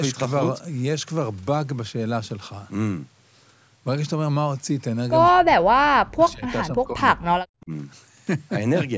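Speech suppressed in double talk hits this speech clip three times: from 5.32 to 6.45 s the voice sinks by roughly 40 dB, from 6.68 to 7.26 s by about 25 dB, and from 7.6 to 7.71 s by about 20 dB. The likely cause is an echo canceller that, with far-end sound on the loudspeaker, could not tell this talker from its own echo and turned both down. The call's microphone processing leaves nothing above 8 kHz.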